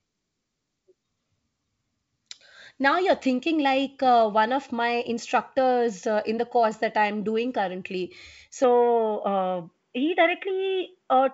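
From 8.64 s the speech turns dull and boxy with nothing above 3.8 kHz, no gap and no level jump. Likely the input switched to a poorer device.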